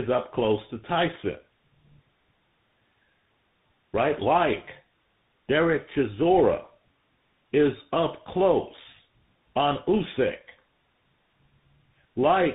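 Tandem speech coding affects the whole clip: the speech sounds decoded and re-encoded at each hop of a chain like GSM full rate, G.711 A-law, then CVSD, each coder degrading the last one's output. Nothing survives above 3.8 kHz, leaving it rough, muffled and warbly.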